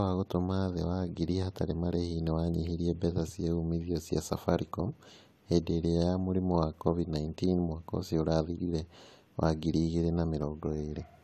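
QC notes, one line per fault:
Throughout: low-bitrate audio saved at a high bitrate. The speech was likely squeezed through a low-bitrate encoder first, something on the order of a 48 kbit/s AAC stage, and only afterwards re-encoded as a much larger 192 kbit/s MP3. The later, generous encoding cannot bring back what the first pass discarded, so the file carries a hard ceiling with nothing above 14 kHz, while the artefacts of the first codec stay in place.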